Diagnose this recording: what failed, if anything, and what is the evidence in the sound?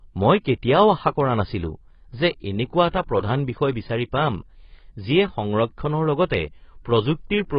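AAC compression, throughout the speech: the top end is cut off, and sibilants and sustained sounds are dull, smeared and warbling. The codec stage is the likely culprit. An AAC-LC encoder starved of bits, which fits about 16 kbps, dropped the high bands and coarsely quantised the rest.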